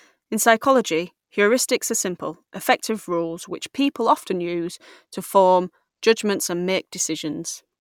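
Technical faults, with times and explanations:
No technical faults detected.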